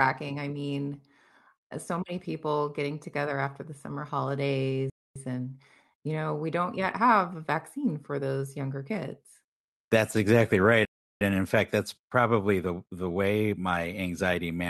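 At 4.90 s the speech cuts to silence for about 0.26 s, then again at 10.85 s for about 0.36 s. These are playback stalls, likely the player running short of data before output recovered.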